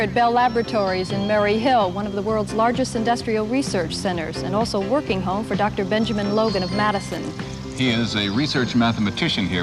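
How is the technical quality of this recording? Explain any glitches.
There is one glitch. Loose connector crackle appears from 7.07 to 7.17 s, a burst lasting about a tenth of a second. A worn or dirty contact somewhere in the signal chain is briefly making and breaking its connection, so the audio is chopped on and off in rapid, uneven fragments, and any DC present on the line turns each break into a pop. It sounds like a short, ragged scratch of crackle cutting across the sound.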